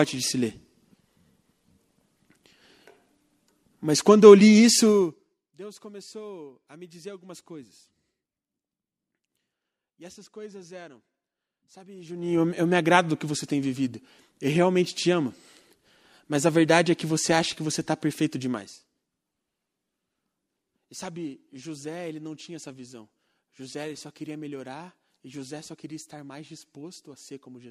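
Zipper noise shows up on three level moves, at 4.90–5.46 s, 11.96–12.42 s and 18.51–18.92 s. The gain jumps in unsmoothed 1 dB steps, about forty a second, so each ramp rides on a fast ticking buzz.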